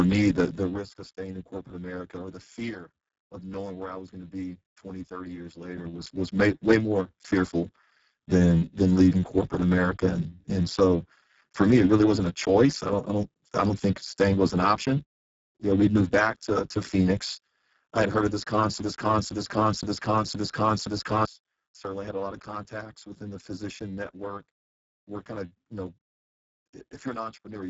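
Speech heard through the Speex codec under heavy strain: the voice is hoarse, noisy and edging toward robotic, with nothing above 7.7 kHz and a hissy, shaped fill in the upper band, which fits a low setting around 6 kbps. Unlike the warbling, swirly artefacts of transform codecs, this damage is buzzy and gritty. From 18.79 s to 21.25 s a broken-record loop takes over: one fragment of about 0.52 s plays five times back to back with identical content, and whatever should have filled that span is gone. The cause is likely a stalled player or stream resending its last buffer. Exact repetition sets it apart from stutter, which cuts short uneven bits, and from a dropout, which leaves silence.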